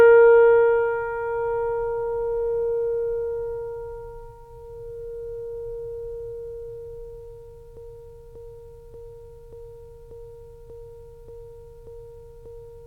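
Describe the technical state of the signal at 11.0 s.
At 11.0 s the music is caught in a broken-record loop. From 7.77 s to the end, a 0.59 s fragment repeats exactly, back to back, nine times. The player or stream likely stalled and kept resending its last buffer. The music that should follow is lost.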